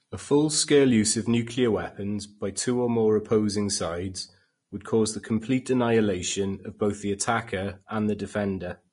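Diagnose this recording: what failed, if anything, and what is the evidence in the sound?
Throughout the speech the top end is hissy and grainy, with nothing above about 10.5 kHz. Sibilants come through as rough noise rather than crisp detail, and consonant onsets sound smeared. The failure sits at the codec stage, likely Vorbis compression at a low setting, which fits a bitrate around 33 kbps. The encoder lowered its cut-off and quantised the remaining treble so coarsely that fine spectral detail was replaced by noise of similar energy, leaving the plainly audible graininess.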